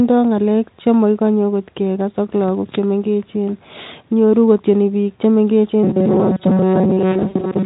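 Robotic sound from repeated short buffers runs from 5.83 s to the end of the clip. The sound hardens into a rigid, metallic buzz pitched at 188 Hz, while the original contour still shows faintly underneath. The likely cause is playback starved of new audio, with the software repeating its last fragment to fill each gap. A 188 Hz buzz means a repeat period near 5.3 ms, which fits a very short buffer. Most of this stretch, roughly two thirds or more, is repeated material rather than fresh signal.

VoIP packet loss concealed by the speech codec occurs inside that buzzing stretch, from 7.12 s to 7.51 s. About 160 ms of audio went missing in scattered gaps, with the longest single gap lasting 80 ms. The decoder covered each gap by extrapolating from its last pitch and spectral shape and lowering the level frame by frame. Those patches sound like smeared, buzzy tone fading toward coloured noise. 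Because each frame builds on the one before, the sound stays weakened and distorted briefly after real audio resumes.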